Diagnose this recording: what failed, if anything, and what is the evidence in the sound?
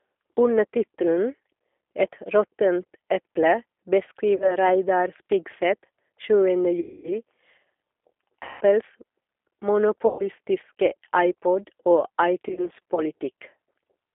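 Codec stage: the speech has been through the G.729 codec at 8 kbit/s, and the damage is plainly audible as a rough, synthetic quality throughout. The decoder rebuilds each frame from a filter and a few pulses, so a spectrogram shows a hard band from 300 Hz to 3.5 kHz and smeared, grainy harmonics.

Network stage: VoIP packet loss concealed by the speech codec occurs at 4.36–4.56, 6.80–7.12, 8.43–8.63 and 10.07–10.26 s, with scattered short gaps over 12.49–13.04 s. The longest hole is about 240 ms. The decoder extends its last pitch and filter into fading, stretched sound. On the waveform these show as smooth, decaying stretches with weak recovery afterwards.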